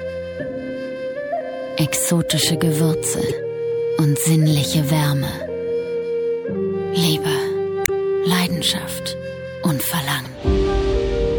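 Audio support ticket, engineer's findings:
Damaged data in a compressed stream at 3.29–3.33 s, 7.83–7.89 s and 10.25–10.27 s. Short chirp or blip each time, 24 to 68 ms long. Probable component: decoder input, not playback. Corrupted bytes in the coded stream make the affected frames misdecode or get rejected. The decoder loses frame sync, emits garbage until it finds the next valid header, then resumes cleanly. Check source file integrity and the transport path.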